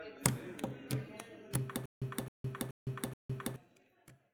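From about 1.86 s to 3.56 s there's a stutter with silent gaps. A short burst of roughly 266 ms plays, then about 160 ms of dead digital silence follows, and the pair repeats four times at a steady 426 ms pace. The likely cause is the player or stream stalling: each retry replays the last fragment it had, then runs dry. Whatever should have played across that stretch is simply gone.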